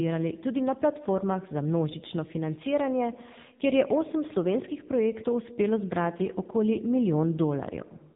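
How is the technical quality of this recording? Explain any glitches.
Quality is poor throughout. AMR narrowband mobile codec damage runs the whole clip. Nothing passes above 3.8 kHz. Heavy coding makes the speech buzzy and synthetic, fitting a low rate near 6.7 kbps.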